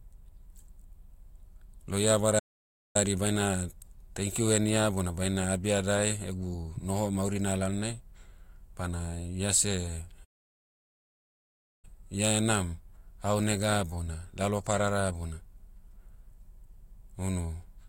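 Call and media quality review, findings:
Playback stall, 2.39–2.96 s and 10.24–11.85 s: speech cuts out mid-flow, silent for about 0.56 s, then about 1.59 s, before resuming. Probable component: player, likely a buffer underrun or blocked audio thread starving the output.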